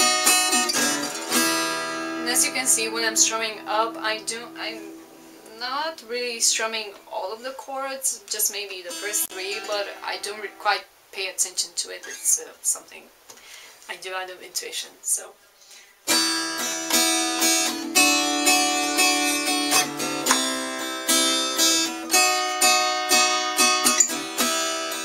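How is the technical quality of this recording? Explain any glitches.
Two brief glitches mar the recording.

From 9.25 to 9.32 s an intermittent contact opens for about 57 ms: the signal drops to faint hiss, with crackle spikes bracketing a flat gap in the waveform.

From 15.05 to 16.05 s there is channel delay with comb filtering. One channel lags around 5 ms, so mono summing carves evenly spaced notches from near 100 Hz, visible as spectrogram stripes and heard as a hollow sound.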